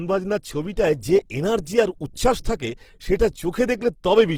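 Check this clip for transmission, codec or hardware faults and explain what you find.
One codec fault runs through the whole clip. Throughout, the speech sounds grainy and rough, not swirly like MP3, because Opus compression in its music mode likely fills starved bands with noise at a low bitrate, around 16 kbps, while keeping full bandwidth to about 20.2 kHz.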